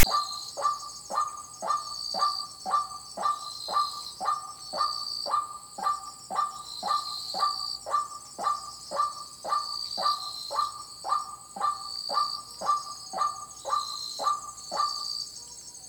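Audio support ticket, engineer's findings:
Harsh, loud rasp with hard edges at 0.00–0.04 s, lopsided to one side of zero, then a brief dead gap. File tags played as audio: text metadata decoded as samples, trailing zero padding giving the silence. Probable component: container parser or decoder start offset.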